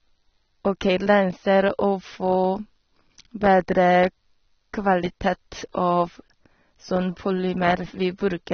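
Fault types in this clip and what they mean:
AAC compression: speech sounds dull and smeared with warbly, fizzy sibilants; spectrogram shows nothing above 6.3 kHz, likely a low-bitrate AAC-LC encode.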